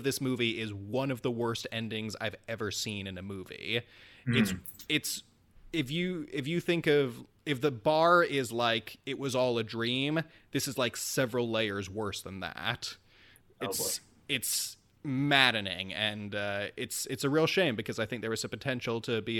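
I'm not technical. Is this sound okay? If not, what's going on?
No. There are two short glitches, each a corrupt frame decoded. The audio was stored in small compressed chunks called frames. A few bits in some of them got scrambled, and the player played them anyway. That puts sound at the wrong pitches for a split second. At 4.34 s, right after "in a movie", a couple of frames are hit. At 9.86 s, after "it was all a", one frame is hit. Each is heard as a brief blip or chirp.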